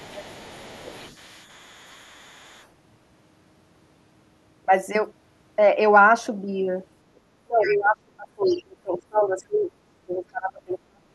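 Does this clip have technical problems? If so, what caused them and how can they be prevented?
Yes. The other side's voice is leaking through from 0 to 2.67 s, roughly 25 dB below the talker. Short scraps return at 7.68 to 7.78 s and 8.45 to 8.63 s. The likely cause is loudspeaker echo that the canceller left in the microphone signal. A headset or better speaker-microphone separation would prevent it.

Speech is suppressed in double talk at 0.81 to 1.01 s, a dip of around 15 dB. It happens again at 7.44 to 9.73 s, dropping around 30 dB, and at 10.06 to 11.05 s, nearly 40 dB. The canceller likely mistook overlapping speech for echo and turned everything down. A canceller with better double-talk detection would prevent it.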